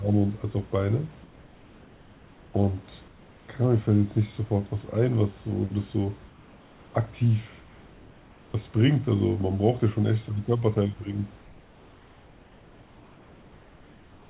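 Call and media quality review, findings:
Comfort noise in place of the background, five pauses: 1.24–2.54 s, 3.08–3.48 s, 6.28–6.94 s, 7.6–8.54 s, 11.42 s to the end. Room background, about 28 dB under the speech, flips to a flat, featureless hiss roughly 2–3 dB quieter. Likely the sender's voice detector pausing transmission and the receiver synthesising noise. Band stops near 4 kHz, which fits a G.711 path.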